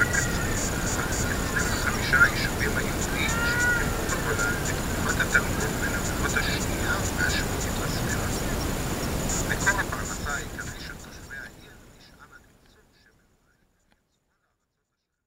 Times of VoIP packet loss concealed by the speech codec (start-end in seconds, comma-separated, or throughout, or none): none